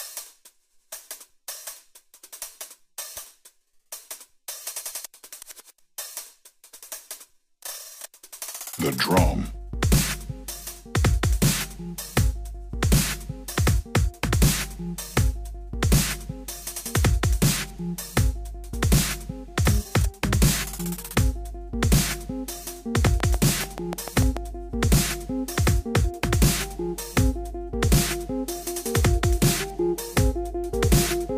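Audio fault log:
23.07–24.38 s: train of clicks, about ten evenly spaced pulses at 6.9 per second, roughly 15 dB above the sound, likely from nearby equipment interference; thin vertical spikes on the waveform and broadband vertical lines on a spectrogram.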